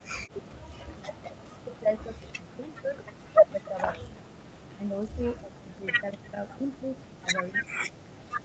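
A speech recording. The voice drops out, by up to about 40 dB, from 1.62 to 3.04 s, 3.45 to 4.25 s and 4.73 to 8.13 s. This is likely speech suppressed in double talk by the echo canceller.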